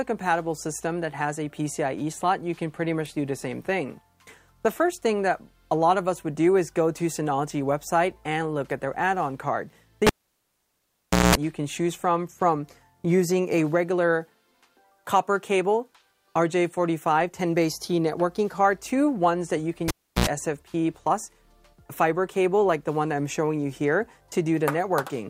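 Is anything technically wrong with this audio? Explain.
Yes. A cable was pulled and plugged in twice while live, at 10.07 to 11.35 s and at 19.88 to 20.27 s. Each event starts with a pop, then the sound drops to near silence for about 1.23 s and then about 0.34 s. A 60 Hz mains buzz lasting about 0.2 s and then about 77 ms follows as only the plug tip makes contact, and a second pop marks the sound returning. That pop, gap, buzz, pop sequence is what separates it from a plain dropout or a crackling connection.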